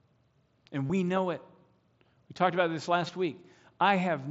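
At 0.87 to 0.90 s and again at 3.07 s there's concealed Bluetooth headset packet loss: dropped packets get patched with repeated recent waveform, leaving a short buzzy smear.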